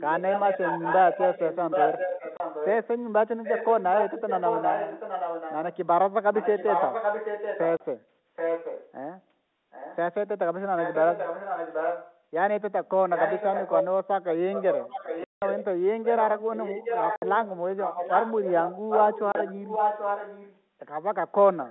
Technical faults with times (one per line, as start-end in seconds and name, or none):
0.00-2.87 echo leak
2.37-2.40 packet loss filled with silence
3.43-5.77 echo leak
6.33-8.92 echo leak
7.77-7.80 packet loss filled with silence
9.71-9.97 echo leak
10.77-12.20 echo leak
13.15-20.61 echo leak
15.24-15.42 packet loss filled with silence
17.16-17.22 packet loss filled with silence
19.32-19.35 packet loss filled with silence
21.67-21.71 echo leak